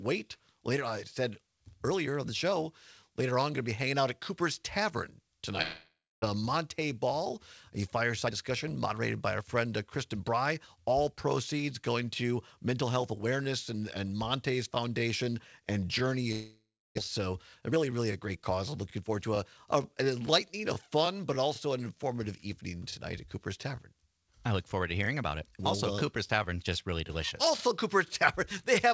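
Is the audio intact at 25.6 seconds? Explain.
Yes, at 25.6 s the audio is intact, with only the ordinary character of the WebRTC call path, whose content stops at 8 kHz in a way that fits a wideband codec such as G.722.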